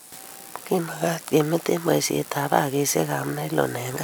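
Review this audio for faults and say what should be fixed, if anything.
From 0.78 to 1.34 s the speech slows by 5.25% and drops 93 cents, close to a semitone, then snaps back to normal rate. This is likely a drift correction step: clock-matching software changed the playback rate in one jump to rebalance its buffer, shifting speed and pitch together. To prevent it, have the resampler follow clock drift continuously with small, smoothed rate adjustments rather than sudden steps.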